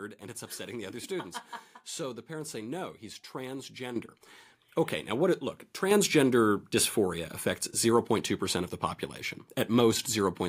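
At 3.96 s the microphone volume stepped up by about 9 dB in a single jump, and at 5.91 s it did it again, this time by about 5 dB. Each time the call software has decided the mic was too quiet and bumped the device's input gain. Since the gain sits ahead of everything, the speech and the room noise both get abruptly louder together rather than easing up.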